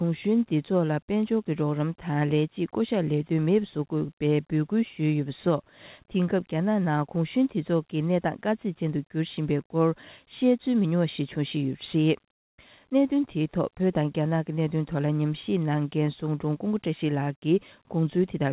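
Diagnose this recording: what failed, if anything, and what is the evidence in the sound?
The fault is in call processing: comfort noise in place of the background. From 12.32 to 12.58 s, about 260 ms, the real background disappears. A steady, featureless hiss replaces it, about 20 dB quieter. That background was already faint, about 66 dB below the loudest parts. The likely cause is discontinuous transmission. The sender stopped sending in a pause, and the receiver filled the gap with synthetic noise. The band stops at 4 kHz throughout, consistent with a narrowband call codec.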